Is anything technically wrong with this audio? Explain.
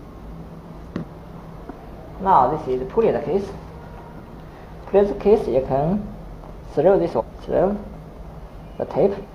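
Yes. Compressed frames are skipped at 0.98–1.03 s, 7.16–7.22 s and 9.20–9.26 s. Whole coded frames, about 46.4 ms each, are never played, so the audio jumps forward by roughly 0.3 s, 0.5 s and 0.2 s, several frames at a time. Each jump leaves a section of the sound simply missing.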